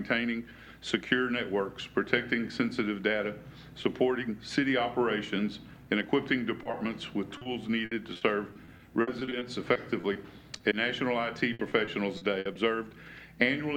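Brief smears and wobbles interrupt the audio at 6.63, 6.71, 7.37, 7.43, 10.57 and 10.69 s, each lasting 20 to 40 ms. This is short concealed packet loss: the decoder extended the preceding sound over each missing piece. From 7.85 to 10.17 s and again from 11.53 to 12.57 s, the sound turns choppy and robotic, with pieces missing. This is repeated packet loss. Holes of up to 60 ms kept recurring and were patched by continuing the last sound, covering about a sixth to a fifth of each stretch.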